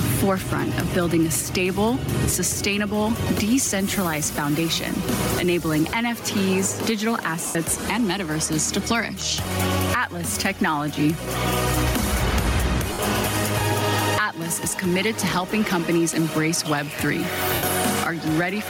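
Throughout the clip there is gain pumping: the gain swings by around 15 dB, ducking under each loud sound, likely a limiter clamping gain set far too high. The waveform looks flattened, with the noise floor rising and falling in step with the peaks.

At 7.47 s, 12.93 s and 17.54 s, lost LE Audio frames leave gaps of 80, 60 and 90 ms, which fits runs of 10 ms frames going missing. The decoder repeats the last spectrum with scrambled phase and fades it, so tones become a brief noisy smear. On a spectrogram, harmonic lines give way to a diffuse, dimming patch.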